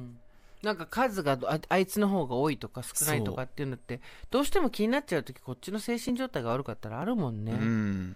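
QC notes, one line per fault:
6.09 s and 7.02 s, dropped buffer (overrun): the speech lurches forward at each point, with no gap or silence around it. Only a tiny slice of sound is missing each time, a millisecond or two, so no syllable is lost. The likely cause is the recording software failing to collect its samples before the hardware overwrote them, so the audio on either side was butted together and the waveform jumps at the join.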